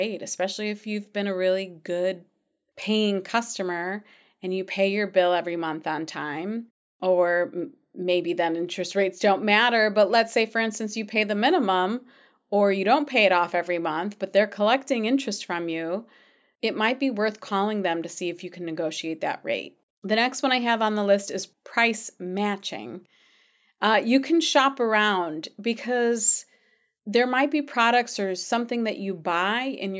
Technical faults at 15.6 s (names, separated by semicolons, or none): none